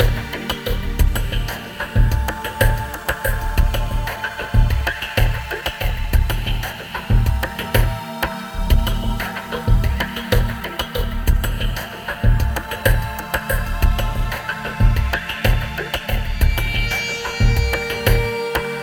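Clock drift between sender and receiver runs through the whole clip: the sender's clock is a few percent fast, so the receiver's buffer keeps overfilling and must be trimmed. From 0.88 s to 18.50 s, repeated timing corrections cut short slices to hold pace, giving an effective speed near 103%. They are heard as faint hiccups and slightly rushed timing, and show as small unevenly spaced seams in the waveform and spectrogram.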